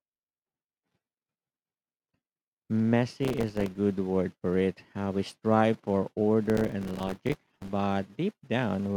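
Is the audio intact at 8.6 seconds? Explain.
Yes, at 8.6 seconds the speech runs through intact, with no audible fault at that moment.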